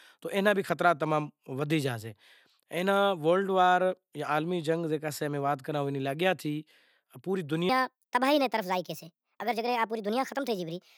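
Wrong sample rate from 7.69 s to 10.97 s, running to the end of the clip: the speech abruptly becomes high and hurried because the samples are being played back faster than they were captured, with no rate conversion in between. Speed and pitch rise together, by a factor of 1.38, about 5.55 semitones up. That ratio fits 32 kHz material played at 44.1 kHz, giving the voice a chipmunk-like, rushed quality.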